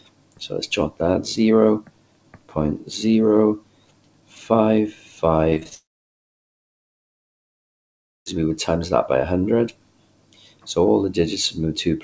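From 5.50 to 5.73 s there is repeated packet loss with a robotic sound: five short holes, the longest about 20 ms, each patched by stretching the preceding sound, so nearly 40% of that quarter-second is synthetic fill. It sounds choppy. On a waveform the envelope stutters into small repeated blocks. A spectrogram shows brief vertical seams and smeared, duplicated harmonic bands instead of smooth movement.

At 5.75 s the sound cuts out and stays away until 8.28 s, a gap of about 2.5 s, which is most likely a long network dropout. A brief fading continuation of the last sound gives way almost at once to near-silence lasting roughly 2.45 s, and the audio resumes without the missing stretch. The waveform is a nearly flat line across most of that span, and the spectrogram is a dark, nearly empty block.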